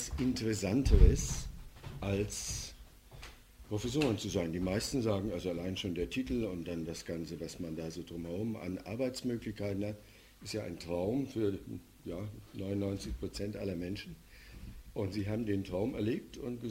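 No technical faults can be heard anywhere in this clip.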